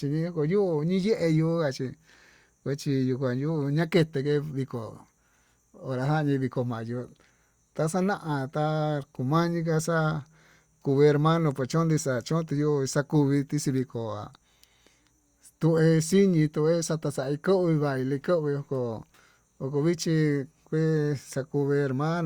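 No technical faults can be heard anywhere in the recording. The speech runs on continuously, with nothing in the signal to flag.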